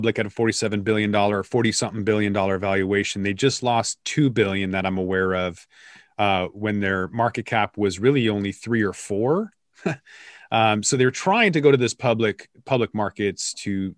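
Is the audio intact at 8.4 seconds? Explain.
Yes, at 8.4 seconds the speech runs on intact, with no dropout, click, distortion or other fault.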